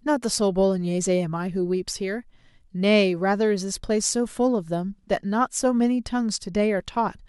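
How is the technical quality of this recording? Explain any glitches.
No glitches can be heard anywhere in the recording. The speech carries on without any audible technical fault from beginning to end.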